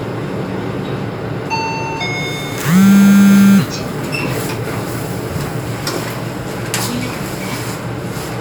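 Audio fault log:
No fault to log.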